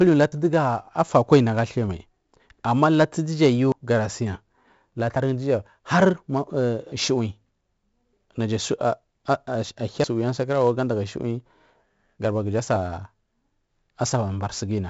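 Speech with heavy 4-bit ADPCM compression throughout: gritty hiss tracks every loud syllable, and a spectrogram shows level-following noise under the voice with nothing above 7.7 kHz, which fits a rate near 64 kbps. Abrupt jumps in the speech at 0.32, 3.72, 5.16, 6.92 and 10.04 s, each skipping roughly 40 to 100 ms, are likely dropped buffers (overrun), seen as hard waveform discontinuities with no silent gap.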